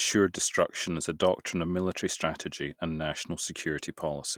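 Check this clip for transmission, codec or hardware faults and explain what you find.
No transmission, codec or hardware faults turned up here.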